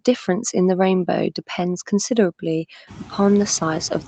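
Noise suppressor artifacts run throughout: the background is cut by about 6 dB between words and swells back under them, and the room noise rises around 3 s.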